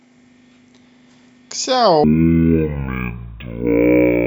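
From 2.04 s to the end at 4.26 s, the speech suddenly drags at half speed and drops a full octave, with a faint mirrored copy in the upper spectrum. This is stereo read as mono: interleaved left and right samples are played back sequentially as one channel.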